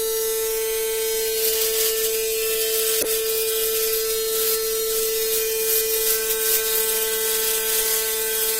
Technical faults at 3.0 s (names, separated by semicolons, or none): corrupt frame decoded